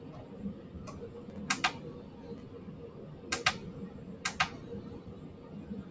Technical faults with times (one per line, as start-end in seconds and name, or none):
0.00-5.90 noise suppressor applied to music or sounds
1.30-1.38 chunks out of order
2.38-2.42 chunks out of order